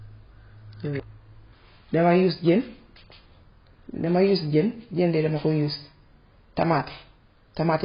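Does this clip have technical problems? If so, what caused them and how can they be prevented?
Yes. Throughout the speech the sound is dull and smeared, with a watery, warbling texture on vowels and fizzy sibilants, and nothing above 5.1 kHz. The likely cause is heavy AAC compression, consistent with AAC-LC at a very low bitrate around 16 kbps: the encoder discards high frequencies and coarsely quantises the rest, leaving spectral holes. A spectrogram shows a hard ceiling at 5.1 kHz and patchy, blotchy gaps below it. Encoding at a higher bitrate, 64 kbps or more for speech, prevents this.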